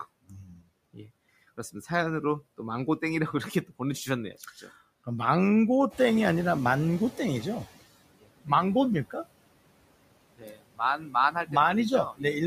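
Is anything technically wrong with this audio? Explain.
Yes. Throughout, the background sinks between phrases and swells under the speech; these noise suppressor artifacts come from frame-by-frame band reduction of about 21 dB.

From 5.9 to 7.7 s, after the room noise jumps by roughly 12 dB near 6 s, the noise comes through louder before settling. This is the noise suppressor catching up: its estimate took about 1.8 s to adapt, finally cutting around 14 dB.

Speech cut by the noise suppressor makes parts of words sound swallowed or faint at 8.19–8.5, 10.38–10.8, 10.97–11.15, 11.31–11.53 and 12.12–12.24 s. The suppressor mistook speech for noise, dropping it by about 10 to 21 dB.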